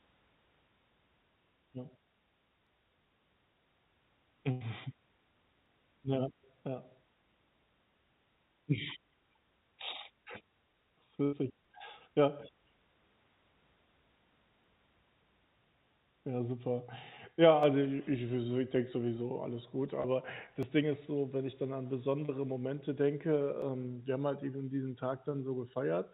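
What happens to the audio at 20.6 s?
At 20.63 s the speech skips: a few milliseconds of audio are missing between chunks, and the two sides are butted together with no gap of silence. The likely cause is a recorder working in 3-second blocks that drops a sliver while handing over from one block to the next. On a waveform the cycle visibly jumps phase at that point. On a spectrogram it appears as a thin vertical seam, cutting across a band that already stops at 4 kHz from the call codec.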